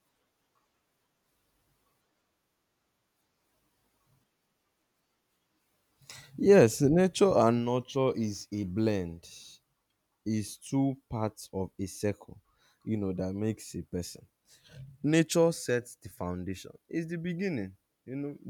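From 8.12 to 10.11 s there's sample clock jitter: the converter's timing wobbles by a few microseconds, adding a faint hiss that swells with loud, bright speech.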